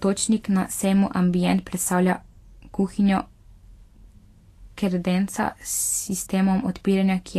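From start to finish the speech carries plainly audible Vorbis compression damage, likely from low-bitrate encoding: nothing survives above 14.1 kHz, and the remaining treble turns to grainy hiss, which fits roughly 36 kbps. Unlike a simple low-pass filter, the band below the cut-off is noisy and roughened rather than clean.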